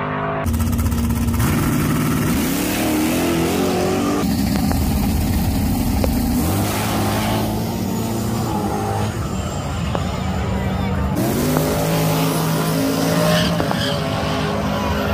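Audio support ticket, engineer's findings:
Loud pops, five events: two pops 4.56–4.74 s; single pops 6.04–6.06 s, 9.95–9.97 s, 11.57–11.59 s; two pops 13.60–13.74 s. Each peaks around 15 dB over the programme, which continues beneath. Likely cause: intermittent connector, switch or driver glitch putting a voltage step into the line. Downstream stages shape it into a short pop or thump.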